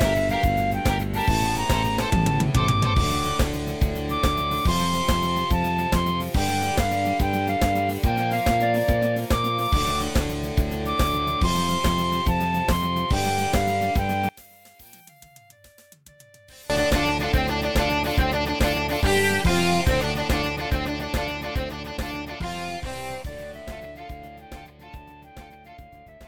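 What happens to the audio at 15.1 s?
Around there, from 14.29 to 16.70 s, the sound drops away by about 29 dB, most likely because one channel is inverted. Summed to mono, whatever both channels share cancels, so nearly all of it vanishes, background included, leaving only a faint residue of their differences.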